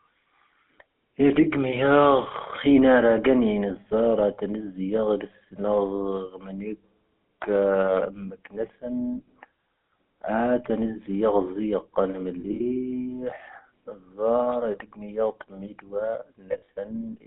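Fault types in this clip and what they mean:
GSM full-rate codec: buzzy, gravelly speech band-limited to about 200 Hz–3.6 kHz, fitting a 13 kbps codec; the spectrogram is empty above 3.6 kHz.
lost GSM frames: at 12.4–12.61 s and 16.52–16.69 s, short rough metallic rings hold the sound; the spectrogram shows frozen, repeated harmonic patches.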